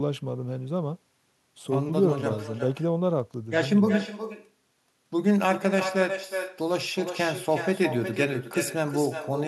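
From start to finish the speech carries echo with no canceller. The far end is playing the call over a loudspeaker, its microphone picks that sound back up, and nothing strips it out, so each phrase returns after the network round trip, roughly four tenths of a second late and about 10 dB quieter and thinner. Unlike room reverberation, which smears straight off each sound, this is a distinct, separated repeat.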